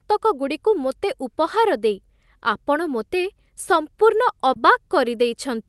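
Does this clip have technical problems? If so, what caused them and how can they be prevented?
Yes. There is a short concealed packet loss from 4.53 to 4.57 s. About 20 ms of speech reached the decoder too late, so the receiver extended the preceding sound for about 18 ms and then blended back, leaving a brief smear. A larger jitter buffer or forward error correction would prevent it.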